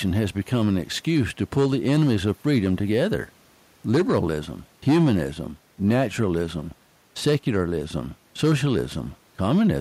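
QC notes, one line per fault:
No faults heard; nothing to flag on this speech.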